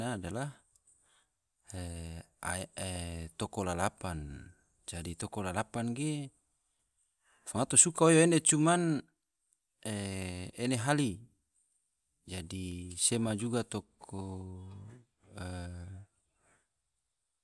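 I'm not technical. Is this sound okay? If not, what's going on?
Yes, it sounds fine; nothing wrong can be heard.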